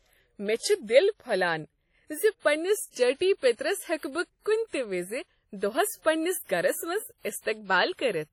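Throughout the speech, washy, ringing hiss and smeared detail suggest heavy WMA compression, likely around 32 kbps; spectrograms show patchy holes and nothing above 17.4 kHz.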